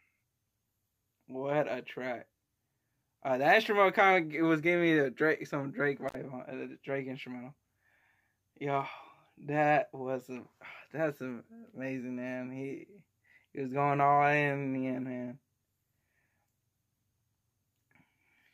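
At about 6.08 s there's an intermittent contact, where a loose cable or plug briefly loses its connection. The signal drops out for roughly 57 ms, coming back by 6.15 s. You hear crackle as the contact breaks and again as it remakes, and during the gap the sound falls away to a faint hiss rather than true silence.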